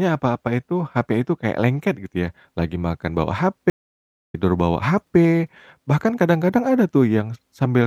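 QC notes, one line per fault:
3.70–4.35 s, stream reconnect: 0.64 s of silence, then the speech resumes roughly 0.7 s further on as a restarted decoder rejoins the live stream.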